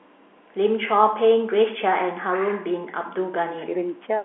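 Nothing stood out on listening to this speech clip, which carries the narrow, bass-trimmed sound of a telephone call line.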